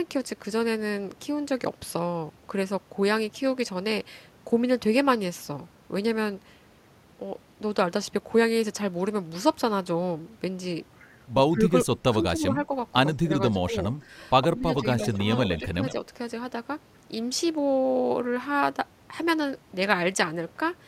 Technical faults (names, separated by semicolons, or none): speech suppressed in double talk; echo leak